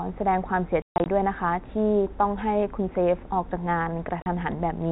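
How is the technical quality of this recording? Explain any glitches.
The speech carries two bursts of packet loss filled with silence, heard over G.711 telephone coding that cuts everything above 4 kHz. Between 0.82 and 1.06 s, 180 ms drops out in scattered holes, the longest 140 ms. At 4.22 to 4.26 s, a single 40 ms hole follows. The hole lengths fit 20 ms packets, and the receiver played dead silence in their place. The gaps therefore open and close with hard edges, instead of the smeared repeats or fades that concealment would leave.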